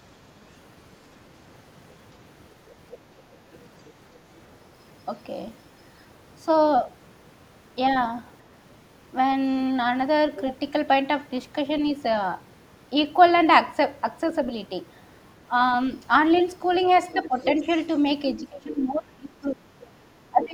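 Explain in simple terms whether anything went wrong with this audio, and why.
There's some other side's voice leaking through: a faint second voice sits under the talker from 2.51 to 4.37 s, a brief scrap at 16.36 to 16.41 s, and a slightly louder stretch from 17.12 to 18.37 s. Most likely the echo canceller didn't fully scrub the loudspeaker sound out of the mic.

You'll also hear speech suppressed in double talk. From 17.14 to 17.65 s the talker's voice dips in short bits while that leaked voice overlaps. From 18.41 s to the end it drops much harder, for about a second and a half in total. That's likely the canceller ducking everything when both sides spoke at once.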